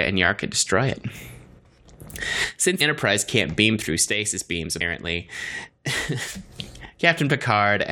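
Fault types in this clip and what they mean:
One channel drops out: at 1.59–1.85 s, after "can destroy it", and at 4.08–6.34 s, after "can't beam through", the speech abruptly falls about 6 dB, then returns. The likely cause is one stereo channel going silent, leaving half the shared signal in the mono sum.
Compressed frames skipped: at 2.80 s and 4.80 s the speech jumps ahead by roughly 150 ms, about seven 23.2 ms frames that never get decoded.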